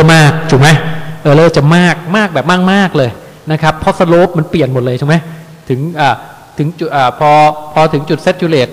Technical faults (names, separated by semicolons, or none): low bit depth without dither